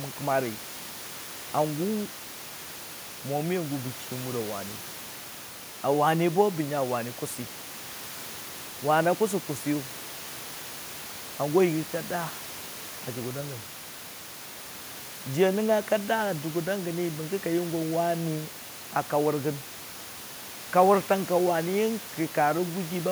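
Nothing goes wrong anywhere in this speech recording, and all you'll notice besides the talking is a bit of room noise sitting about 18 dB below it, which simply comes from the space the microphone was in.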